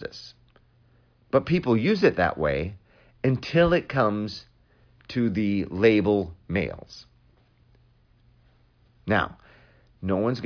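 No technical faults are audible anywhere in the recording.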